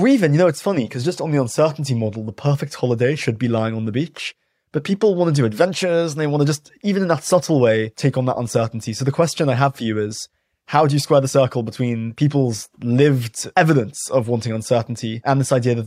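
Nothing in this recording trips any alarm, with no dropouts, glitches or other technical problems turning up anywhere along the way.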